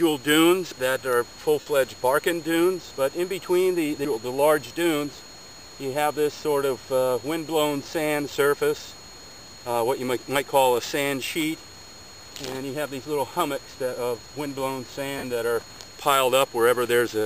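At 1.60 s and again at 15.18 s, lost LE Audio frames gap the sound for about 60 ms and 53 ms, which fits runs of 7.5 ms frames. The LC3 decoder repeats the last spectrum with scrambled signs, so each gap becomes a brief noisy smear.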